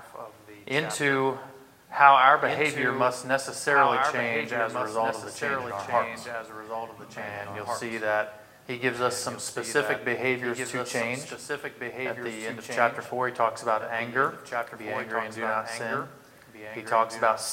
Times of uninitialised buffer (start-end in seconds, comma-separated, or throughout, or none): none